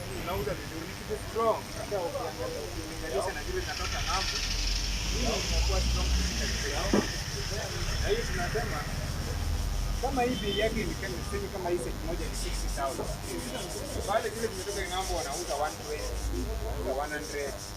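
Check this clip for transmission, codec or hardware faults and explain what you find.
One hardware fault is present throughout: DECT cordless phone buzz. A nearby DECT handset or base pulses radio bursts 100 times a second, which the audio circuitry rectifies into a thin, harmonic-rich 100 Hz buzz sitting roughly 15 dB under the sound.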